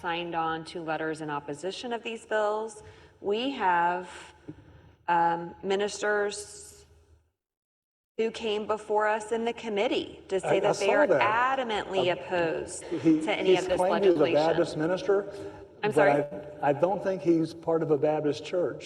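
Packets arrived too late or not at all at two points, with the receiver concealing each gap. From 14.11 to 14.17 s a short concealed packet loss left about 40 ms missing. The decoder extended the preceding sound to cover it, then blended back into the real signal, so the audio briefly smears or wobbles and a very short sound may vanish. From 16.23 to 16.33 s a burst of packet loss removed about 80 ms. The receiver again continued the last sound across the hole while fading it down, which turns the gap into a decaying buzz or hiss, and the audio resumes past the lost stretch with that portion gone.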